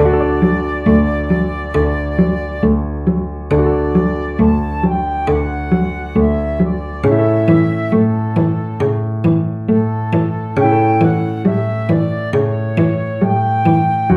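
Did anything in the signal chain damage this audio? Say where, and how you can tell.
No damage anywhere in the chain.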